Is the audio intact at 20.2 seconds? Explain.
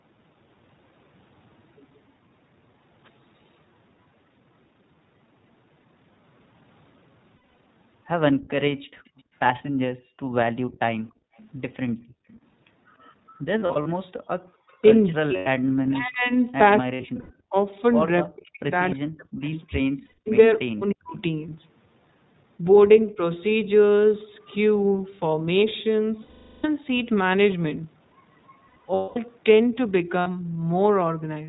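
No. Between 20.06 and 20.28 s, lost iLBC frames leave about 180 ms missing, scattered over about 200 ms with the longest run near 100 ms. The decoder repeats the last pitch cycle, so the gap sounds like a held, buzzy vowel.

This sits inside speech suppressed in double talk, from 14.82 to 21.16 s. The speech dips by up to roughly 40 dB, about three seconds in all. This is likely an echo canceller turning down its own talker along with the loudspeaker echo.

Throughout, the iLBC codec cuts everything above 4 kHz and adds a rough, synthetic edge, which fits a 15.2 kbps mode.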